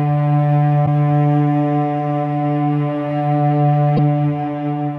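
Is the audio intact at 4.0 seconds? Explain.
No. Just before that point, from 3.96 to 3.99 s, there is a broken MP3 bit reservoir, likely caused by frames cut from the stream. The next frame reached back into earlier frames for its borrowed data and decoded bytes that belonged to a different frame. In the sound this is a 30 ms glitch, about one frame of roughly 26 ms, where the audio skips ahead and the decoded sound briefly breaks up before it recovers.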